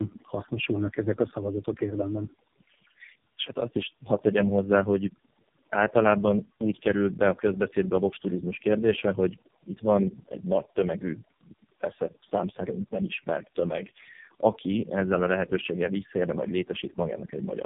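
From start to finish, overdone noise removal has been applied. The noise reducer was set far too hard. Any frequency band close to its noise estimate gets pushed down or shut off, and softer parts of the speech are cut along with the hiss. Between phrases the background drops, breaking up into small twinkling specks.

Tandem speech coding is also present the whole way through. The speech passed through several low-rate speech coders in a row. The sound points to three of them, likely of the iLBC and AMR-NB kind, joined by ordinary telephone links. Each coder had to work on the damage left by the one before. Nothing is heard above about 3.7 kHz. The speech is rough, dull and warbling, worse than any single link would make it.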